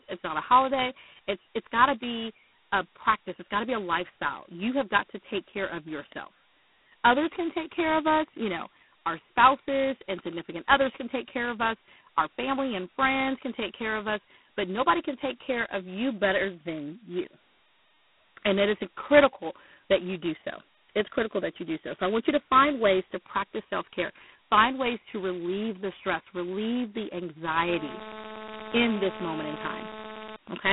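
From start to end the speech passes through G.726 ADPCM coding. The band runs from about 150 Hz to 3.5 kHz, and nothing gets through above 3.9 kHz. The codec damage is heavy. Each sample carries only two bits of difference from an adaptive prediction, which fits 16 kbit/s. That coarse step leaves a harsh, rasping hiss riding on the speech. The hiss rises and falls with the speech level.

At 27.68 s, right after "the stress relieve the", GSM phone buzz starts. It lasts until 30.36 s. A 2G phone nearby is in a call. Its radio bursts at 216.7 Hz are rectified by the audio circuit. The result is a hard, raspy buzz at that rate, full of harmonics. It sits about 11 dB below the speech. It has no relation to what is said.

At 30.47 s GSM signalling bursts follow, for 0.12 s. The phone is still in the call, but its user has gone silent. So it sends only a short group of radio bursts, again at 216.7 Hz. 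The audio circuit rectifies these too. They come through as a brief 217 Hz buzz, around 20 dB below the speech.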